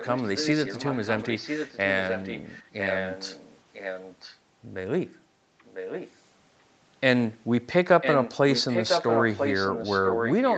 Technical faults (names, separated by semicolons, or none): echo leak